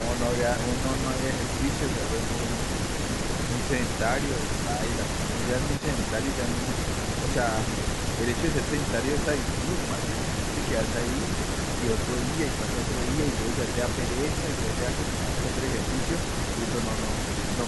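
Speech with two brief faults. At 0.83 s there are lost LE Audio frames: about 10 ms, consistent with a single LC3 frame, goes missing, and the decoder fills the gap by repeating the previous spectrum with scrambled phase signs. This produces a short noisy smear. On a spectrogram, the harmonic lines blur into a vertical noise band. From 5.78 to 5.82 s a faint delayed copy of the voice appears, trailing by 274 ms and sitting about 20 dB below the speech. This is likely an echo leak from a far-end loudspeaker that the echo canceller failed to fully remove. In the waveform it shows as a low-level ripple, and on a spectrogram as weak, displaced harmonic traces.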